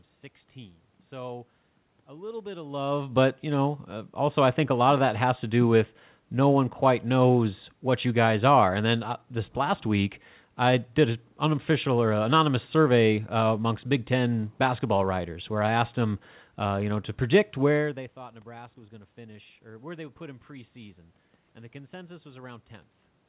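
The signal shows no technical faults: the room's background noise and the two level changes near 2.5 s and 17.5 s as the talker shifts position belong to the recording, and the band ending at about 4 kHz fits a narrowband call path such as G.711 A-law at 64 kbps.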